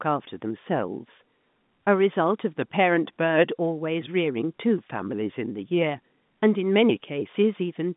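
No technical faults can be heard anywhere in the speech. What comes through is the narrow band of a G.711 A-law telephone line, roughly 150 Hz to 3.6 kHz, with nothing audible above about 3.8 kHz.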